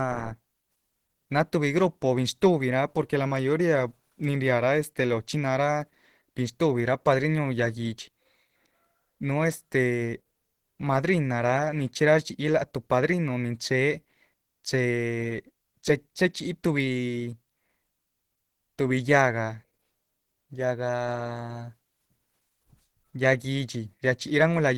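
Throughout the speech, the sound has a muffled, hoarse quality with a grainy roughness on sustained tones, the plainly audible mark of likely Opus compression at a low rate, consistent with about 16 kbps. At this rate the encoder appears to be in its hybrid mode, coding the lower band as speech and filling upper bands with folded or noise-like energy. Content still reaches about 20.2 kHz, so the damage is texture, not lost bandwidth.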